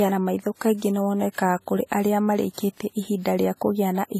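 All the way through, the speech carries stacked codec smearing and nothing above 14.1 kHz, likely from transcoding between lossy codecs, something like WMA re-encoded to low-rate AAC.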